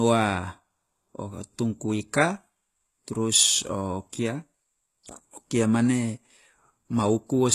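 The speech was likely squeezed through HE-AAC compression at a rate fitting about 16 kbps, with rebuilt treble stopping at 12.3 kHz, so s sounds turn plainly gritty and metallic throughout.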